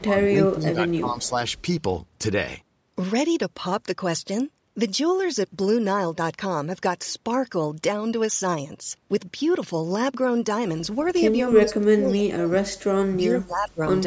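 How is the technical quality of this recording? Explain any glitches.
The recording has two kinds of call fault, each near its start and end. The speech is band-limited to 8 kHz by normal call microphone processing.

Speech suppressed in double talk occurs from 0.0 to 1.34 s, 11.5 to 12.91 s and 13.14 to 13.8 s. The voice dips by about 10 dB, then about 35 dB, then about 25 dB. The likely cause is an echo canceller that could not separate the talker from the far side and ducked both.

Echo leak appears at 0.89 to 0.93 s, 1.22 to 1.28 s and 11.02 to 11.13 s. Faint scraps of voice return 299 ms late, about 30 dB below the speech. The likely cause is loudspeaker pickup the canceller failed to remove.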